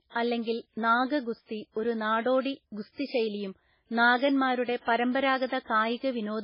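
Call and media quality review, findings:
Speech throughout: nothing above about 5.3 kHz, dull and band-limited. Watery, swirling texture on every stretch, s sounds chirpy and metallic, consonant attacks smeared. Probable component: encoder, likely MP3 compression at a very low bitrate, fitting roughly 16 kbps. Encoder applies a fixed treble cutoff; bit starvation toggles weak spectral lines frame to frame. Damage heavy, constant across the clip.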